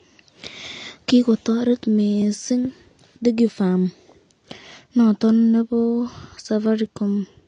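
The speech was likely encoded with AAC compression at a low bitrate, consistent with something near 32 kbps. The encoder discarded everything above 9.7 kHz and quantised the remaining bands coarsely, so the audio sounds plainly dull and smeared, with a warbling, fizzy texture on sibilants.

At 2.22 s a block of digital silence, 0.67 ms long and consistent with a 32-sample buffer left unfilled, drops the signal abruptly to silence and back; at 6.66 s a shorter 0.27 ms gap does the same. Each produces a brief tick.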